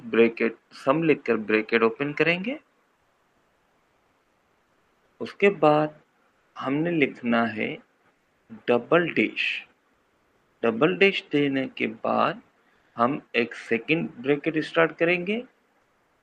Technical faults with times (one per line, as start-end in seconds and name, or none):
2.95-10.61 sound chopped by the voice detector
12.75-12.95 comfort noise in place of the background
12.93 onset clipped by the voice detector
15.81-16.22 comfort noise in place of the background